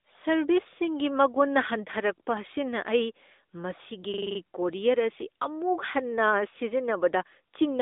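From the start, the speech carries the sound of an AMR narrowband mobile codec. Everything is confined to a telephone band of roughly 250 Hz to 3.7 kHz, with nothing at all above 3.8 kHz, so sibilants lose their edge and the voice sounds boxed-in. The vocal-tract model and sparse pulse excitation give a plainly audible buzzy, synthetic grain, which fits a mid-rate AMR-NB mode near 10.2 kbps. On a spectrogram, energy stops at a hard ceiling just under 4 kHz across the whole clip.

From 4.14 to 4.40 s, a system hang loop takes over. The playback side froze while the audio hardware kept replaying its ring buffer, so one 42.67 ms slice repeats exactly six times. At a loop rate of 23.4 Hz, this comes across as a rapid, mechanical stutter rather than a steady tone. The loop length fits a 2048-sample buffer. The waveform shows identical repeated blocks, and the spectrogram shows vertical stripes at regular intervals over that span.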